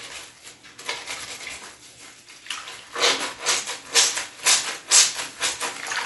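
Dolby Digital compression is the likely cause of the damage heard throughout the clip. The audio has nothing above 11.4 kHz, so it sounds dull and closed-in, and the coding harm is plainly audible as a rough, fluttering noise clinging to tonal parts. Starved of bits, the encoder narrowed the band and left many frequency lines without mantissa detail, which the decoder filled with dither noise. This points to a bitrate around 64 kbps.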